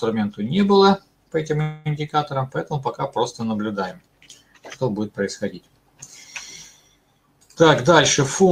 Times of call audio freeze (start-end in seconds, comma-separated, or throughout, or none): 1.61-1.87